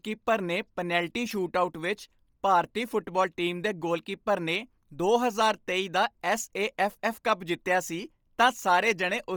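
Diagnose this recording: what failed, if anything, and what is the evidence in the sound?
The fault is at the codec stage and runs through the whole speech clip. The upper spectrum has a heavy breathy, grainy edge where detail was zeroed and filled with shaped noise, nothing above 20.2 kHz. This is likely Bluetooth LC3 compression, fitting 10 ms frames at roughly 32 kbps.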